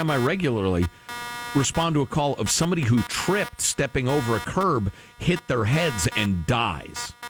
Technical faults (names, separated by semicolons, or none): computer activity noise